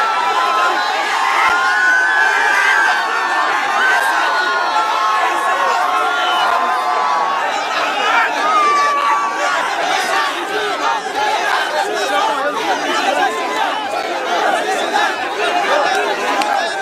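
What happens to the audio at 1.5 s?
At 1.49 s there is a gap between chunks: a silent hole of about 7 ms where one 2.5 s chunk ends and the next begins. Nothing is lost; the sound simply stops and restarts abruptly. The waveform drops to near silence between hard edges, and the spectrogram shows a thin vertical blank strip.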